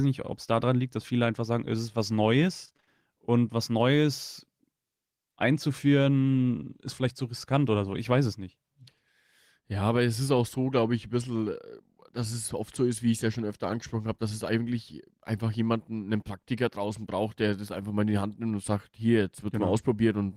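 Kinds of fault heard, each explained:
Repeated packet loss (robotic sound): From about 2.65 to 2.88 s, just after "sagen es ist was" and before "und was", six short dropouts follow one another, the longest about 22 ms. Each hole is filled by stretching the preceding sound, so nearly half of that stretch is patched material, giving a choppy texture with pieces missing. On a spectrogram the harmonics turn into smeared, repeated blocks with abrupt seams, and the waveform shows copied cycles butting against fresh signal.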